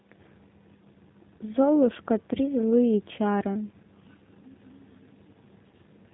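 G.729 codec coding runs throughout the speech. Nothing above 4 kHz survives, and the voice sounds rough and synthetic, which fits an 8 kbit/s G.729A rebuild.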